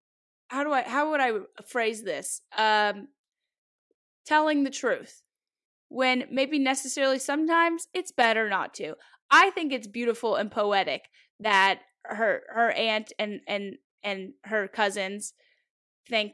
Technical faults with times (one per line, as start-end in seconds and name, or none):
none